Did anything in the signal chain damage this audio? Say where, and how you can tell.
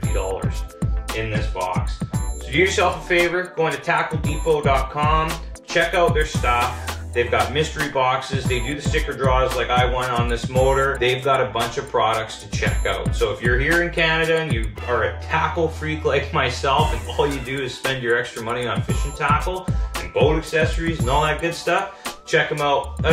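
No, there's nothing here I'd pin on any stage of the chain, so you can relax about this one.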